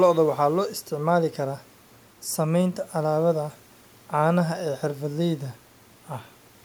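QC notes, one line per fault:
No faults found on this speech clip; nothing to log.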